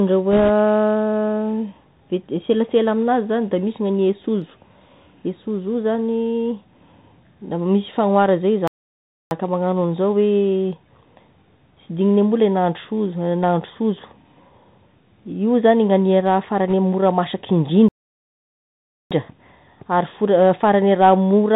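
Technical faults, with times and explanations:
Throughout, Bluetooth CVSD headset codec: the whole clip is squeezed into that narrowband headset sound, with nothing above 4 kHz, scratchy s sounds, and a grainy hiss under the speech. It's the one-bit up/down coder, consistent with a 64 kbps link, whose step size can't keep up with loud high content.
8.68 to 9.31 s and 17.88 to 19.11 s, playback stall: the speech drops out mid-flow for about 0.64 s, then for about 1.22 s. The player likely ran dry or got blocked, so output went silent until data arrived again.
16.70 to 16.74 s, bit errors on a Bluetooth voice link: a short burst of rushy crackle over the speech, with no sharp clicks. Flipped bits, at roughly one and a half percent, each nudge the CVSD step by an amount that grows with the speech level, and the damage fades instead of popping.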